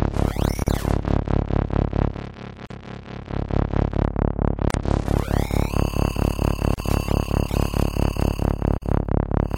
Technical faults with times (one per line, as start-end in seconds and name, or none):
0.64-0.67 gap at a join of encoded pieces
2.67-2.70 gap at a join of encoded pieces
4.70-4.74 gap at a join of encoded pieces
6.74-6.78 gap at a join of encoded pieces
8.78-8.82 gap at a join of encoded pieces